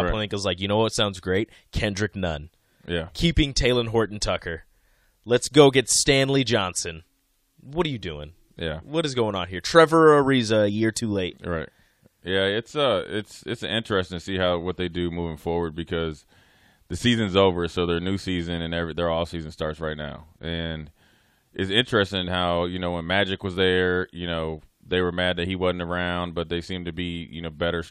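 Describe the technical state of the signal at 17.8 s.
At 17.8 s the signal is intact, with no audible fault in the speech at that point.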